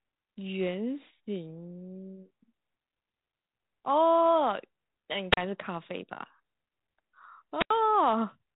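Wireless microphone squelch dropouts occur at 5.32 to 5.37 s and 7.57 to 7.71 s. Each time, the analogue FM radio link fades far enough that the receiver's squelch gate shuts off the output. The speech breaks into near silence for about 35 ms in the first event and about 85 ms in the second, then resumes. The gaps sit in speech already narrowed by telephone-band coding consistent with 32 kbit/s G.726.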